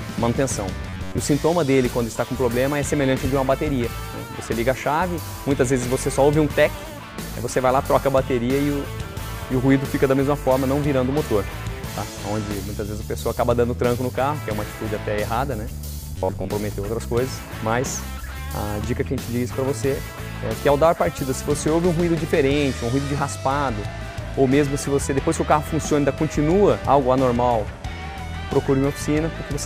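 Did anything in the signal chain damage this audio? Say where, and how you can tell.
Yes. Twice the sound collapses into a rigid, metallic buzz locked at 93.8 Hz: from 0.90 to 1.19 s, where most of the stretch is affected, and from 16.16 to 16.51 s, where about half is. This is robotic sound from repeated short buffers, likely at the driver or buffer stage. Fresh audio arrives late, so a chunk of roughly 10.7 ms is looped in its place. That loop period sets the fixed pitch, and the audio that should have played is skipped.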